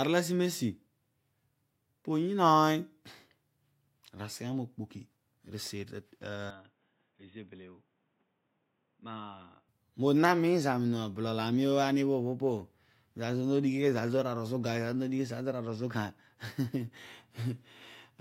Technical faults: input switched to a poorer device

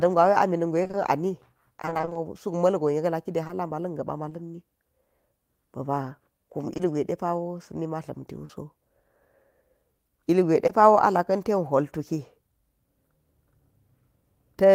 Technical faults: repeated packet loss (robotic sound); scattered short gaps; short concealed packet loss

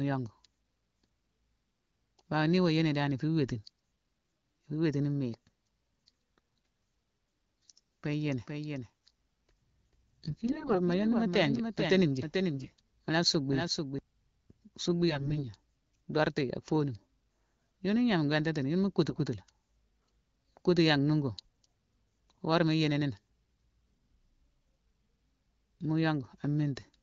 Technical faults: doubled audio track; AMR bit errors

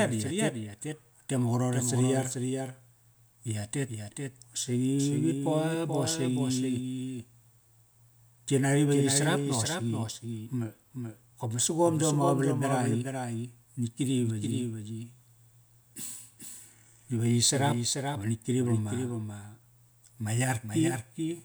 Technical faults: doubled audio track

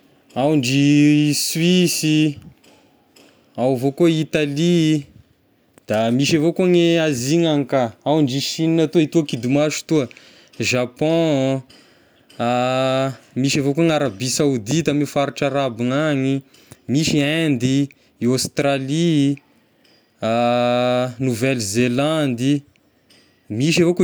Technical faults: none

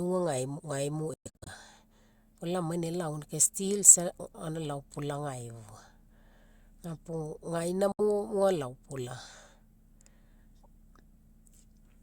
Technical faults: Bluetooth dropout

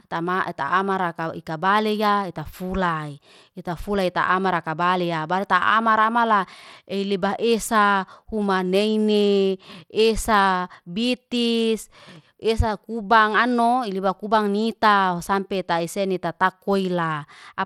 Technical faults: Bluetooth SBC compression

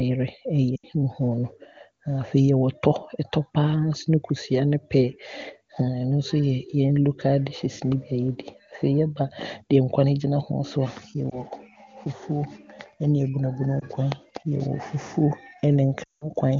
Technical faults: lost AMR speech frames

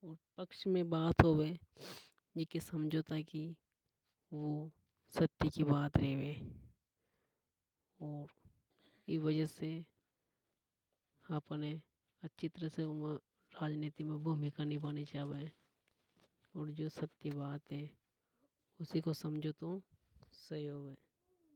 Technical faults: none

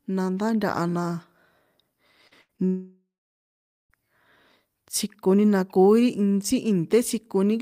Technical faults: short concealed packet loss; burst of packet loss; long network dropout

